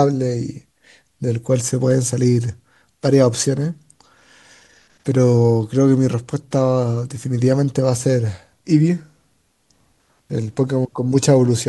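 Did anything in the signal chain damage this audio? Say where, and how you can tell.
No, nothing in the signal chain damaged this audio.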